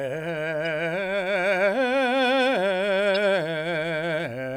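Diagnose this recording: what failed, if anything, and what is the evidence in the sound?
Damaged data in a compressed stream, at 0.65 to 0.67 s and again at 3.14 to 3.16 s, shows up in this music as two brief glitches, each about 20 ms long. The fault lies at the codec stage, in the stored or transmitted compressed data. Corrupted bytes made the decoder misread those frames and lose sync. It then searched for the next valid frame header and resumed clean decoding.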